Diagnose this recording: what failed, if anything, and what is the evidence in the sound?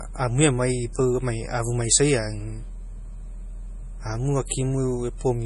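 Low-bitrate audio saved at a high bitrate, present throughout the speech from start to finish, at the codec stage. Nothing sounds above about 11.4 kHz, and the speech carries the smeared, watery texture of a heavily squeezed MP3. This is likely a low-bitrate MP3 encode, around 32 kbit/s, re-encoded at a generous rate such as 256 kbit/s. The second pass keeps the first encoder's losses and its band limit intact, because discarded detail cannot be rebuilt.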